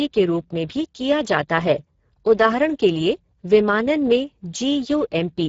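Speech clip carrying Speex codec damage throughout, plainly audible as a hoarse, noisy texture from starved CELP excitation, consistent with a low setting near 10 kbps. The band above 4 kHz sounds like shaped noise fill, with nothing above 7.6 kHz.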